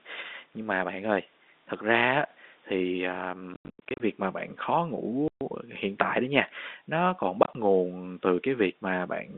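Packet loss filled with silence hits at 3.54–4.0 s, after "á thì à", then 5.28–5.41 s, before "hiện tại đó nha", and 7.43–7.55 s, after "đó nha nó còn". Lost packets, which fits 10 ms framing, were replaced by silence, leaving hard-edged gaps in the narrowband telephone-coded speech.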